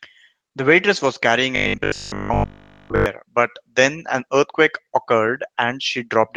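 From 1.35 to 1.41 s the speech turns briefly rough and noisy with no gap. This is a lost packet rebuilt from error correction: about 40 ms, which points to two packets, was replaced by low-bitrate copies carried in the following packets.

Between 1.56 and 3.06 s the voice becomes a rigid, metallic buzz at 50 Hz that still loosely tracks the speech. This robotic sound is likely caused by repeated short buffers. Audio arrived too seldom, so all of that stretch was filled by looping the last 20 ms.

At 5.27 to 5.33 s the same brief roughness returns. Again a lost packet was rebuilt from error correction, with about 40 ms, consistent with two packets, patched from the embedded copies.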